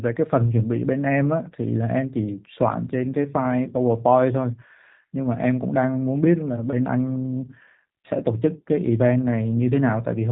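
From start to finish the speech has passed through the G.729 codec, a sound that fits its 8 kbit/s low-complexity variant. Each 10 ms frame is rebuilt from a vocal tract filter, a pitch predictor and a few pulses, so nothing above 4 kHz survives, and the voice comes out plainly rough, buzzy and synthetic.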